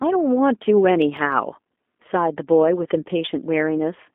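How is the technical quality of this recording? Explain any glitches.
The technical quality is poor. Two faults are audible: plainly audible low-bitrate codec damage throughout and a short burst of ticks near the start.

The G.729 codec colours the whole clip. The speech sits in a narrow telephone band of about 250 Hz to 3.5 kHz, and nothing is heard above 3.6 kHz. The codec rebuilds each 10 ms frame from a vocal tract filter, a pitch predictor and a few pulses. That coarse model leaves the speech slightly rough and synthetic. The thinness and roughness fit an 8 kbit/s coder.

CD scratch ticks appear between 1.02 and 1.32 s. There are three of them, the longest lasting about a millisecond. They come roughly once per disc revolution. A scratch destroyed more data than error correction could recover, so the player patched or muted those samples. Each patch is heard as a sharp, tiny click, spaced at a steady rhythm.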